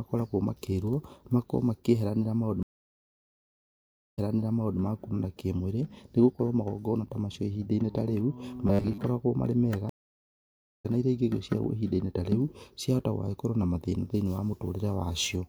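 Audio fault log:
2.63–4.80 s, stream reconnect: the connection dropped and the player restarted its decoder mid-stream. After about 1.5 s of silence the speech resumes 0.63 s earlier than where it broke off, so that stretch is heard twice, with a brief muted or faded onset.
8.67–8.98 s, robotic sound from repeated short buffers: new audio likely arrived too slowly, so the software kept repeating a 10 ms slice and skipped most of the real speech. The repetition imposes a fixed 100 Hz buzz, giving a rigid, metallic tone that only loosely tracks the speech.
9.89–10.86 s, stream reconnect: a second break leaves about 0.95 s of silence, and the speech picks up roughly half a second later than where it stopped, so that part is lost.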